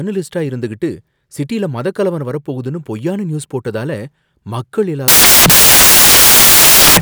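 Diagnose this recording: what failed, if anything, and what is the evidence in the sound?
Sample-format conversion failed: from 5.08 s to the end, samples built from the wrong bytes turn the speech into loud, harsh broadband noise, as misordered low bits dominate each value.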